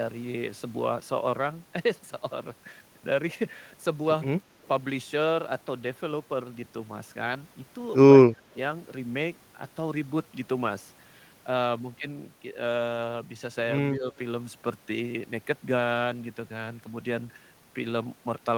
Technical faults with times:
8.29-8.44 speech suppressed in double talk
13.90-14.14 speech suppressed in double talk

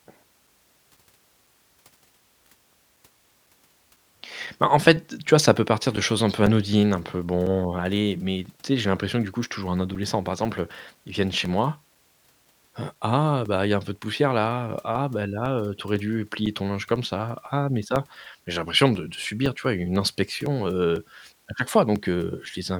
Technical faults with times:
0.47-22.46 periodic USB or driver dropouts

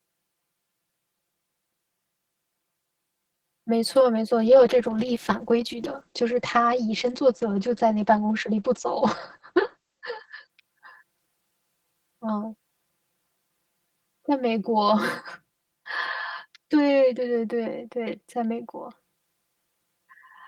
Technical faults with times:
0.00-20.48 channel delay (comb filtering)
4.48-10.55 call bitrate drop

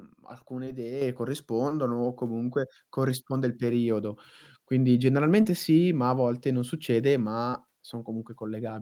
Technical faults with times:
0.65-0.69 short concealed packet loss
1.02 microphone volume stepped up
1.69-1.72 short concealed packet loss
5.42-5.46 short concealed packet loss
7.50-7.55 short concealed packet loss

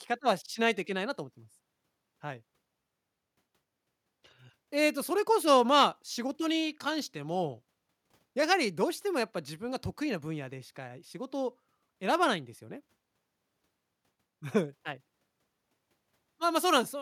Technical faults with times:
none

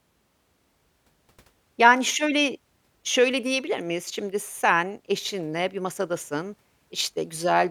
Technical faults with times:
none

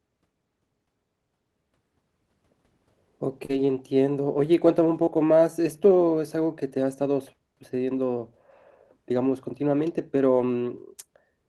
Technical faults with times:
3.45-3.51 short concealed packet loss
3.49-3.79 lost packet rebuilt from error correction
5.05-5.09 short concealed packet loss
5.07 lost packet rebuilt from error correction
10.37-10.47 lost packet rebuilt from error correction

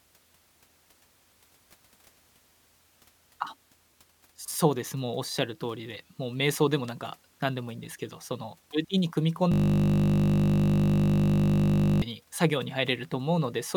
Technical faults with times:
9.52-12.02 system hang loop

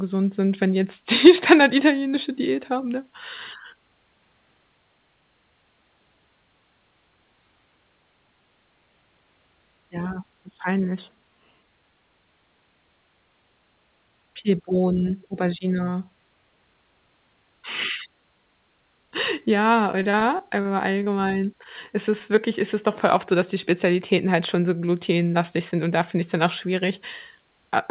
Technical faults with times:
19.92-21.08 repeated packet loss (robotic sound)
22.36-22.39 short concealed packet loss

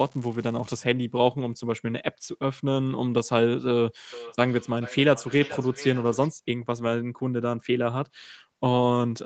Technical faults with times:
0.00-0.82 unreliable data bit
4.13-6.34 feedback echo between two devices

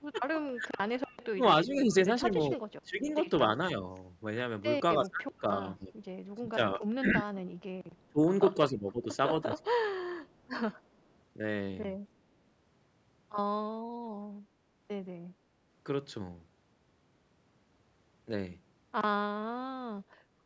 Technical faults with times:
0.00-20.45 DC offset
0.00-0.69 speech suppressed in double talk
1.34-3.09 speech suppressed in double talk
2.51-2.57 echo leak
4.67-7.35 speech suppressed in double talk
8.12-9.71 speech suppressed in double talk
9.91-10.48 echo leak

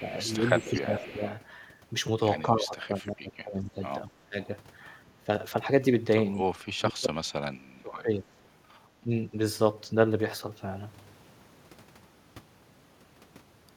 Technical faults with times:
0.00-1.17 echo leak
0.10-1.23 speech suppressed in double talk
2.45-4.37 speech suppressed in double talk
5.22-5.28 speech suppressed in double talk
6.34-8.27 speech suppressed in double talk
9.03-9.34 speech suppressed in double talk

